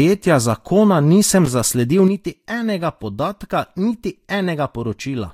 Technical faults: loose connector crackle; one channel drops out

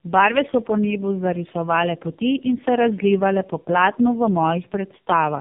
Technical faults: tandem speech coding

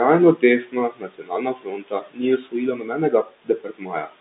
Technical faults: noise suppressor artifacts; speech cut by the noise suppressor

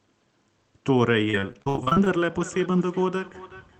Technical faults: repeated packet loss (robotic sound); feedback echo between two devices

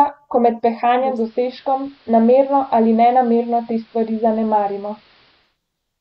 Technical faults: digital radio blending to analogue

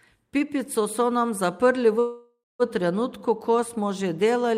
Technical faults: call audio freeze

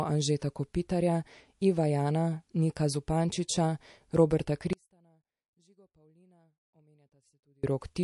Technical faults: MP3 compression; pre-echo; audio dropout to a faint residue

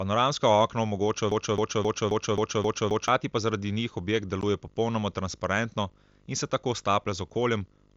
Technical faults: video or display buzz; broken-record loop; unconcealed Bluetooth headset packet loss

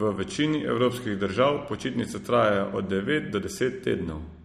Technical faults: MP3 compression

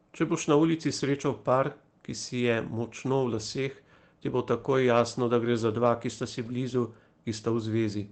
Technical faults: lost packet rebuilt from error correction

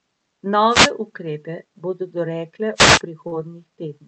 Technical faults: wireless microphone noise hit; short concealed packet loss

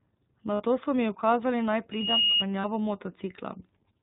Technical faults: iLBC codec; lost iLBC frames; loudspeaker feedback squeal

